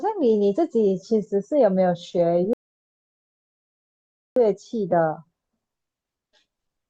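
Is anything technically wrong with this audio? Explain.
Yes. From 2.53 to 4.36 s there is a rebuffering stall: playback ran dry and waited for more data, inserting about 1.83 s of silence before the speech resumes exactly where it stopped. On a spectrogram it shows as a blank vertical band, and on a waveform as a flat line.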